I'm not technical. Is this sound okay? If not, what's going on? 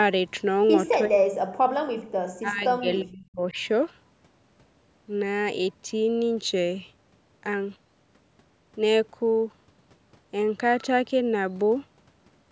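No. From 1.07 to 1.38 s the voice nearly vanishes, and from 2.4 to 3.56 s it dips for about a second. This is likely speech suppressed in double talk: the call's echo control heard both sides talking at once and turned the talker down too.

Between 2.05 and 2.1 s, the room sound in the background drops for a split second. This is background gated by the echo canceller. Unlike the other fault, it hits the quiet background rather than the voice, and it lasts only a moment.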